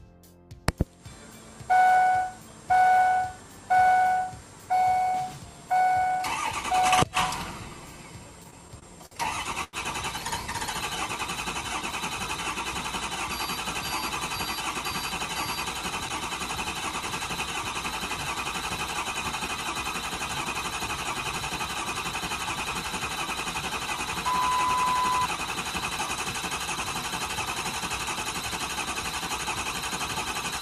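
Between 8.43 and 9.13 s the audio stutters with repeated stalls: packets arrived late, so the jitter buffer emptied five times and the receiver stretched the preceding sound, about 119 ms in all, the longest gap 54 ms, with nothing lost. On a spectrogram these appear as short, smeared horizontal streaks where spectral detail freezes, and the waveform shows repeated, slightly faded copies of one cycle. A short stall from a late packet follows at 9.64 to 9.75 s. A single packet came about 91 ms late, and the last sound was held for that long before playback resumed where it left off, heard as a drawn-out sound with a slight buzz or dip. The spectrogram shows one flat, frozen band, and the waveform a stretch of repeating periodic shape.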